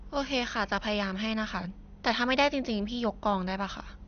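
Throughout, the speech sounds dull and gurgling, with nothing above 6.5 kHz, most likely MP2 compression starved of bits, consistent with roughly 48 kbps.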